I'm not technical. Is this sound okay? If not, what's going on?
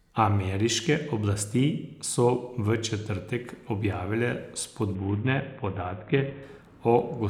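No. From 4.95 to 6.43 s the speech turns dull and gritty, then clears. That's a Bluetooth SBC bit pool drop: a crowded wireless link forced the phone to send less detail. Unlike a simple muffled filter, this adds a rough, sandy noise along with losing treble.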